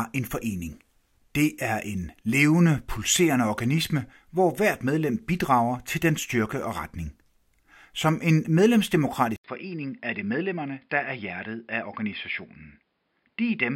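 At 9.36 s the speech cuts out for about 80 ms, then resumes audibly duller and boxier through to the end. Above 5.2 kHz the band is empty, the level sits a few decibels lower, and a new, faint background noise appears well beneath the speech. These abrupt changes in bandwidth, tone, level and noise point to an input switched to a poorer device, likely another microphone or a headset's call profile taking over mid-recording.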